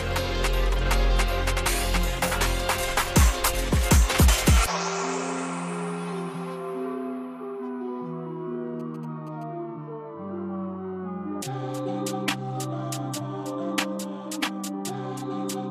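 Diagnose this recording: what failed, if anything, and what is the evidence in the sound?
The analogue wiring is where this went wrong: GSM signalling bursts got in from 8.80 to 9.43 s. You hear that galloping dit-dit-dit run of short buzzes at about 217 Hz, sitting roughly 25 dB under the sound. A nearby 2G phone was signalling, sending brief groups of radio bursts, and some junction in the audio circuit rectified that RF. Its pulse envelope turned into an audible buzz at the burst repeat rate.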